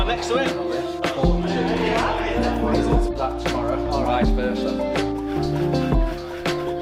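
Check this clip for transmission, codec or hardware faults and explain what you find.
Nothing in the transmission path, encoding or playback hardware shows up as a fault anywhere in the clip.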